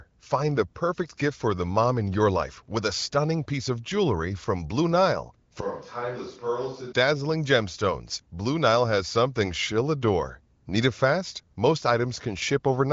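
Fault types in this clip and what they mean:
Switch to a distant microphone: from 5.61 to 6.92 s the speech turns suddenly roomy and hollow, about 5 dB quieter and thinner in the bass, with room noise roughly 30 dB below it, likely because the close microphone dropped out and a farther one took over.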